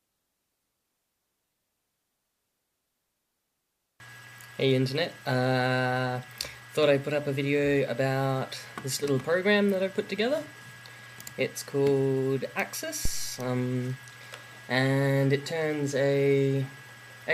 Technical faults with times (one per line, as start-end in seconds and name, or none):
13.05-13.40 phantom power thump